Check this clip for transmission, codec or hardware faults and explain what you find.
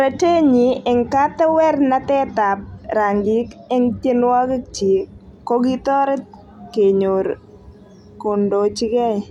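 No faults can be heard anywhere in this speech recording.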